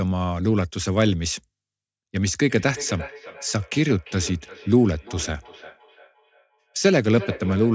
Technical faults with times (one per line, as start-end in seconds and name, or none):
2.48-7.74 feedback echo between two devices